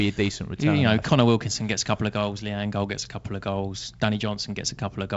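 Nothing here counts as a fault; the speech comes over G.722 wideband telephone coding at 56 kbit/s, with content reaching up to about 7.7 kHz and only light coding texture, just as that codec normally sounds.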